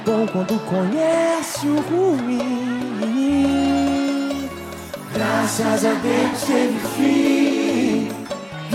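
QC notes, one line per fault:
6.28 to 6.35 s and 7.49 to 7.51 s, corrupt frame concealed: two concealed spans, about 68 ms and then 26 ms long, each consistent with a couple of damaged AAC frames that the decoder caught and papered over by muting or reusing a scrambled copy of the previous spectrum.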